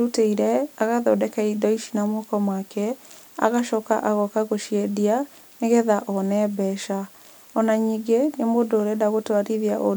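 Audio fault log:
Nothing to log here, as the speech comes through without a single audible fault anywhere along the way.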